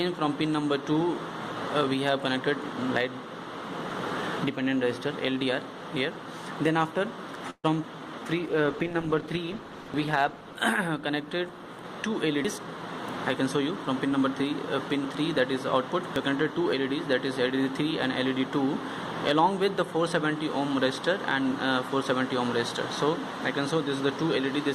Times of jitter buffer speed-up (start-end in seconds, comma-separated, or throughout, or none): 11.95-12.82, 13.41-14.22